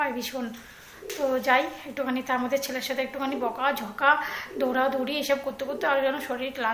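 No technical faults are audible.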